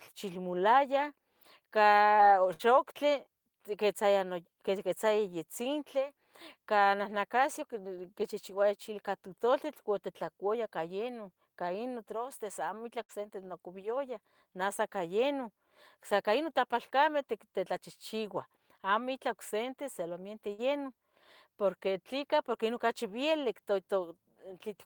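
Bursts of packet loss hit this speech clip three times, at 2.53 to 2.62 s, 13.03 to 13.12 s, and 20.53 to 20.61 s, just after "ocsente solamente". Each time, several consecutive packets never arrived in time. The receiver stretches the last sound for about 55 to 60 ms, fading it as a held buzz or hiss. The speech then resumes with about 60 ms of the original missing, so it jumps slightly forward.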